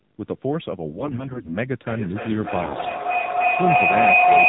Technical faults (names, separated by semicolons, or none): video or display buzz; AMR narrowband mobile codec; AMR bit errors; feedback howl